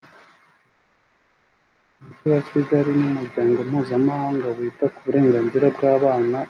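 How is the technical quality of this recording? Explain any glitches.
One glitch stands out. Call audio freeze, 0.69 to 2.01 s: delayed packets likely emptied the jitter buffer, so the last sound smears into a fading buzz, then speech resumes 1.3 s late, nothing lost.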